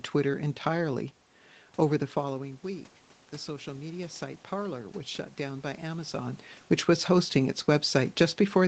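A speech recording with one fault: automatic gain rising between 3.46 and 6.43 s. Around 2 s the talker moves away, and the voice arriving at the microphone falls by about 11 dB. The call's gain control reads this as a quiet input. It then lifts its gain slowly, by about 4 dB, over roughly three seconds. Voice and room noise swell together as the gain climbs. Near 6 s the talker moves again.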